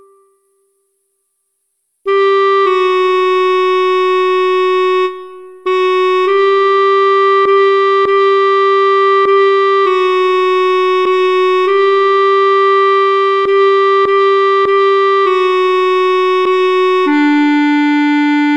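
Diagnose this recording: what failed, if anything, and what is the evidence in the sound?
Listening closely, nothing in the recording stood out as a failure at any stage of the chain.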